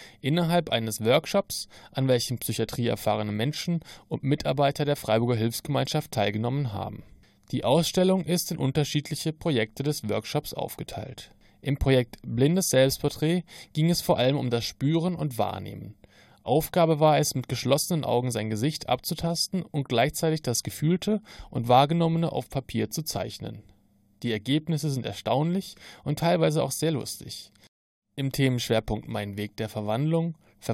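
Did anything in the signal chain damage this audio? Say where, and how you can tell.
No, nothing stood out on listening that would point to damage at any stage of the chain.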